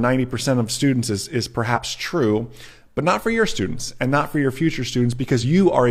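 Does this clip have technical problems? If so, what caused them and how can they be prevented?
Yes. The speech carries damaged data in a compressed stream at 1.72 to 1.78 s and again at 5.39 to 5.44 s, short bursts of about 61 ms and 54 ms. In both places corrupted bytes reach the decoder, which misreads the affected frames, loses sync and hunts for the next valid frame header, producing a brief glitch. Prevent it by verifying files with checksums and using a transport that detects and retransmits corrupted packets.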